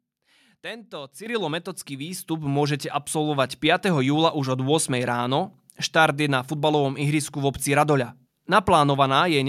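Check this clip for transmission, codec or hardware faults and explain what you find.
Two faults of the same kind. Microphone volume stepped up at 1.26 s and 2.28 s: the capture software raised the input gain abruptly, so voice and background jump together, by about 9 dB, then about 6 dB.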